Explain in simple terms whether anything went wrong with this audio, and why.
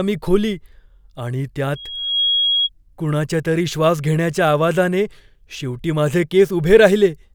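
Between 1.75 and 2.69 s, a loudspeaker feedback squeal breaks in. A mic picked up its own speaker and looped the sound around until one pitch near 3.3 kHz took off, swelling in under half a second to about speech level before "कुणाच्यातरी श्वास घेण्याच्या आवाजाने".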